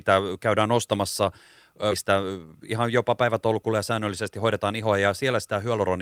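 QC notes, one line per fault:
1.91–1.93 s, skip ahead: Right after "käydään ostamassa" playback jumps forward with no gap. About 0.7 s of speech is gone because it was dropped while later audio was already queued. The two sides are butted almost directly together, so the speech lurches abruptly. On a waveform there is a hard splice with no silence. On a spectrogram the harmonic and formant tracks break and restart at different positions instead of flowing through.
2.03–5.24 s, jitter buffer speed-up: Over this stretch the speech runs at about 109% of normal speed while the pitch stays the same, so it sounds hurried. The buffer was holding more audio than its target, so the receiver trimmed repeated short pieces of one or a few pitch periods, removing roughly 0.3 s in total. On a spectrogram, pitch harmonics stay at the same frequencies while syllables are compressed in time. The waveform shows tiny, closely spaced splice points within voiced segments.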